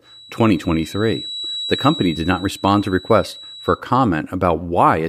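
From the start of the speech to about 3.84 s, a feedback whistle sits behind the talker: a thin, steady tone at 3.9 kHz, roughly 15 dB below the voice, swelling and fading slowly in level. The likely cause is a loudspeaker-to-microphone loop held just at the edge of feedback, sustaining one frequency without building up. On a spectrogram it shows as a narrow horizontal line at 3.9 kHz that stops at 3.84 s. In the waveform it is hard to pick out beneath the speech.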